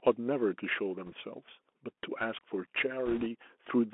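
Throughout, the speech sounds thin and boxed in, with scratchy s sounds, a granular hiss underneath and harsh distortion on loud, bright moments. That is the Bluetooth CVSD headset codec, which fits a 64 kbps link. It passes only about 250 Hz to 3.4 kHz, and its one-bit up-or-down steps cannot keep pace with fast, loud high-frequency movement.

From 1.06 to 1.14 s, and again from 3.06 to 3.27 s, a rushing crackle washes over the sound, with no sharp clicks. These are bit errors on a Bluetooth voice link. Flipped bits each nudge the waveform slightly and then fade. The error rate is around one and a half percent in the first burst and about double that in the second, which is noticeably rougher.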